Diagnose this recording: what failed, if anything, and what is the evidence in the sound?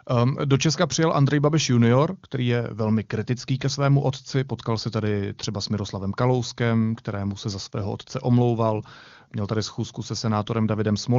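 Nothing stood out on listening to this speech recording as a failure at any stage of the chain.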